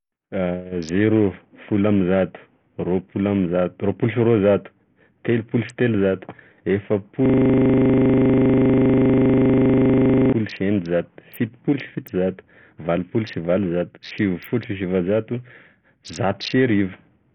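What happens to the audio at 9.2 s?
At 9.2 s the audio is inside a system hang loop that runs from 7.26 s to 10.33 s. The computer or its audio driver stopped supplying new samples, but the sound hardware kept replaying the same 40 ms piece of its ring buffer, about 77 times in a row. At a 25 Hz repeat rate, the speech turns into a rough, rapid stutter, close to a coarse buzz, with nothing new coming through until 10.33 s.

Across that moment, and throughout the clip, the sound is also heavily degraded in a way that points to Bluetooth SBC compression at a very low bitrate as the likely cause. A coarse bit allocation leaves the upper sub-bands starved, so the treble thins and flickers. Gritty quantisation noise and aliasing sit on the speech, and there is no content above about 19.1 kHz. The stuttering loop repeats this damaged sound as well.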